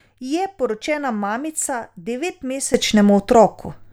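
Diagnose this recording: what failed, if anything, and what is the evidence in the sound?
A sudden gain jump at 2.74 s lifts the speech and its background noise together by about 13 dB, and the louder level holds to the end of the clip. Because the noise floor rises in the same step as the speech, the change is being applied to the whole digital signal rather than coming from the talker or the room. The cause is likely a gain setting or bit shift in call processing or the driver, applied instantly instead of ramped in.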